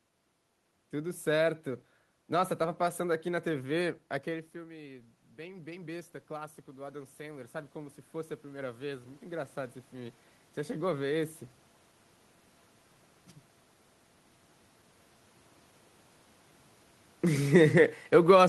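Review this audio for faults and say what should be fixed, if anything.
Automatic gain rising, 4.27 to 10.96 s: after the talker moved away around 4 seconds, the input fell by about 14 dB, and the gain control slowly climbed about 11 dB to compensate, so the voice and the room noise swell together over several seconds. A steadier microphone distance would prevent this.

Automatic gain falling, 17.27 to 18.46 s: the gain control found the input too loud, or its background noise too strong, and eased its gain down by about 3 dB, so the voice and background sink together near the end. Keeping the talker at a fixed distance would prevent this.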